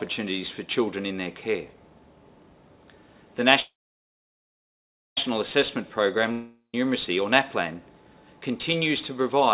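Call audio freeze, 3.6 to 5.18 s: the last sound stretches into a fading buzz, then about 1.47 s of near-silence, likely because delayed packets drained the jitter buffer. When audio resumes it picks up where it stopped, so roughly 1.57 s of gap is added but nothing is lost.

Long network dropout, 6.32 to 6.74 s: again the sound smears into a decaying hiss and goes quiet for about 0.13 s. This time the likely cause is packets that never arrived, so about 0.48 s of material is skipped and the audio returns further on.

Jitter buffer speed-up, 7.31 to 7.75 s: the receiver trims short pitch-period slices to shed excess buffered delay, around 40 ms in total. The sound plays about 7% faster at unchanged pitch and feels briefly hurried. The band stops at 4 kHz throughout, which fits a G.711 mu-law call path at 64 kbps.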